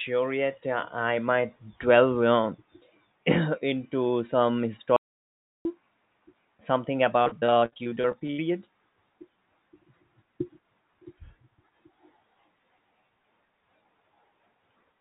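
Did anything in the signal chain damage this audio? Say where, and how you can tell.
Yes. Just after "into some", the speech cuts out at 4.96 s and returns at 5.65 s. The gap is about 0.69 s of silence with no room tone. That points to an audio dropout to silence, likely at the device or driver stage, where the input vanished while the recorder kept writing silence.

From 7.22 s to 8.40 s the speech turns choppy, broken by a rapid run of short holes up to 76 ms long. This is repeated packet loss on the network leg. The concealment keeps stretching the last sound to cover the holes, which fills roughly two fifths of that span with synthetic continuation.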